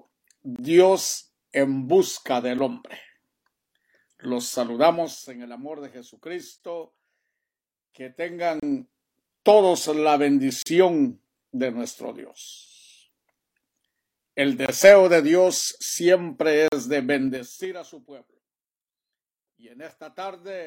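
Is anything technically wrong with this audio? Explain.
Yes. The audio has two distinct faults: recurring gaps between stream segments, and zipper noise during three level changes.

Gaps between stream segments occur at 0.56, 2.58, 6.58, 8.60, 10.62, 12.66, 14.66 and 16.68 s. They arrive about every 2 s, which fits 2-second segments whose timestamps don't quite meet, so the player pads the join with silence. Each hole has hard edges and lasts from about 4 to 42 ms. It is heard as a brief dropout, though no material is actually lost. On a waveform each gap is a flat-line notch. On a spectrogram it is a thin, full-height vertical blank.

Zipper noise appears at 4.86 to 5.32 s, 8.22 to 8.90 s and 17.28 to 17.74 s. In these spans the gain moves in unsmoothed jumps rather than gliding. The first span steps down by 3 dB at a time for a total drop of about 15 dB. The second rises in 2 dB steps by about 15 dB. 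The third falls in 4 dB steps by about 20 dB. The steps come around ten per second, and each one clicks, so the sound ticks or zips as the level moves. The waveform envelope looks like a staircase, and the spectrogram shows faint broadband vertical lines at each step.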